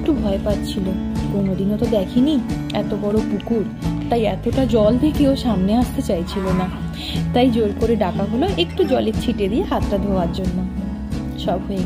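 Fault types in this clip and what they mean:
Drift correction step: Software reconciling two mismatched clocks likely slowed the playback rate in a single jump to rebalance its buffer, running about 5.5% slow. Because speed and pitch move together, the sound sags by roughly a semitone (about 98 cents) from 4.19 s, stays detuned and dragged for about half a second, then snaps back to normal rate and pitch at 4.71 s.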